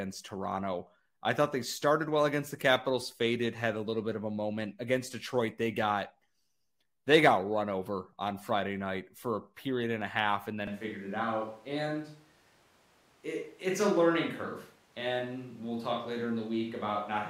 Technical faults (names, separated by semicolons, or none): switch to a distant microphone